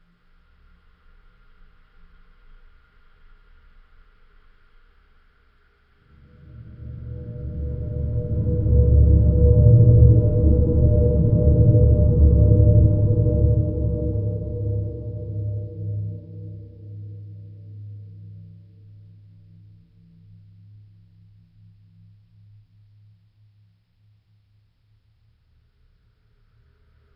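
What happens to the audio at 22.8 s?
Nothing goes wrong at 22.8 s; the sound carries on intact through that moment, with no dropout, click or glitch to be heard there.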